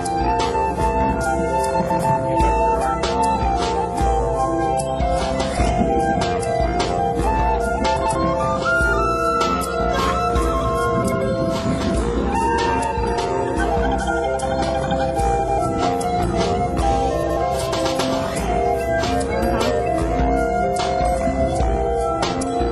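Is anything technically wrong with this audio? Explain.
Yes. Frames out of order occur at 1.81–2.00, 7.96–8.16, 11.02–11.22, 15.39–15.59 and 17.22–17.38 s. Two adjacent blocks of 92.9 ms (69.7 ms in the last) were decoded in swapped order, so each stretch plays its halves exchanged. The result is a garbled flutter, with no time lost.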